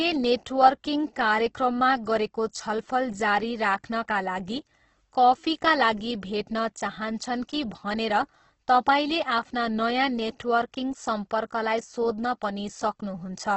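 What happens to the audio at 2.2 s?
At 2.2 s, as throughout the clip, the speech carries heavy damage, likely from Opus compression. Starved of bits at a rate that fits about 12 kbps, the music-mode encoder fills bands with noise. The sound turns grainy and rough, with nothing above 8.1 kHz.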